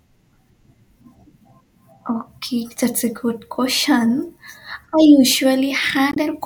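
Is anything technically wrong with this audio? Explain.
Yes. From 6.10 to 6.17 s there is damaged data in the compressed stream: the decoder hits corrupted frames, loses sync and hunts for the next header, producing a brief glitch. A spectrogram shows a broadband smear; the waveform shows a discontinuity.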